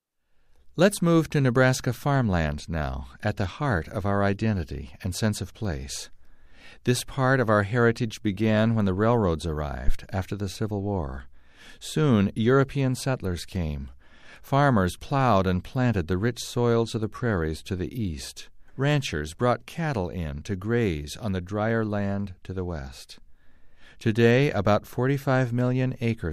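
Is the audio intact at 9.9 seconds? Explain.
No. A deep thump peaking at about -7 dBFS hits from 9.88 to 9.95 s and dies away within roughly 16 ms. This is a phantom power thump: a supply switched on or off on the live input sends a step through the coupling capacitors.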